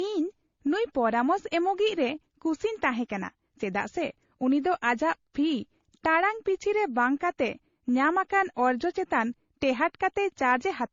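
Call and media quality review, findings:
Transcoding between lossy codecs, whole clip. Speech sounds dull and smeared, with the artefacts of both codecs heard together. Likely cause: a low-bitrate MP3 encode, around 32 kbit/s, re-encoded to AAC-LC at a similar rate. AAC spends bits re-coding MP3 artefacts and adds its own. Spectrogram: hard ceiling near 7.2 kHz, patchy holes and blocky time-frequency smearing below it. Waveform: softened transients.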